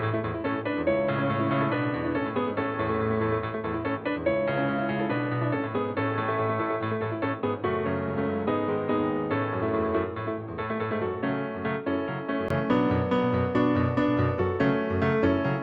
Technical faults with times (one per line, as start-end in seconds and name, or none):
0.00-12.50 input switched to a poorer device